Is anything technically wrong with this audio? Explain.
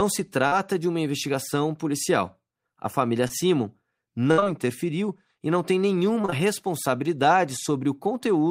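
Yes. The speech has two kinds of network damage.

Short concealed packet loss occurs at 0.47 to 0.54 s, just before "de uma investigação policial", then at 3.28 to 3.31 s. It recurs at 4.40 to 4.44 s and 4.44 to 4.48 s, ending just before "interferiu e não tem". It returns at 6.22 to 6.26 s, 6.26 to 6.30 s and 6.30 to 6.34 s, starting right after "interferiu e não tem". The first gap lost about 40 ms. The rest lost about 20 ms each. The decoder covered each hole by extending the preceding sound, then blended back into the real audio. You hear brief smears or wobbles. The three back-to-back gaps near 6.3 s run together.

A burst of packet loss hits at 4.31 to 4.40 s. About 60 ms never arrived in time. The receiver stretched the last sound across the gap and faded it down. It becomes a held buzz or fading hiss. The speech then resumes further on with that stretch missing. Two more short gaps follow immediately, so the disturbance runs to 4.48 s.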